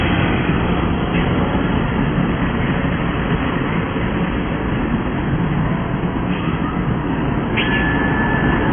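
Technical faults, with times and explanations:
Throughout, AAC compression: the sound is dull and smeared, with nothing above 3.4 kHz and a warbling, fizzy texture on sustained parts. The likely cause is heavy AAC-LC coding at a rate that fits about 16 kbps. The encoder lowered its cut-off, quantised the remaining spectrum coarsely and left gaps or noise-filled bands. A plain low-pass filter would give a clean dull top, not this unsteady, smeared texture below the cut-off.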